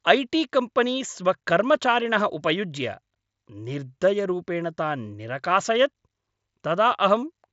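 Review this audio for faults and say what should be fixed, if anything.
Nothing needs fixing: the speech passes through a Bluetooth mSBC headset codec, which limits it to about 7.7 kHz and adds only the light graininess typical of that codec.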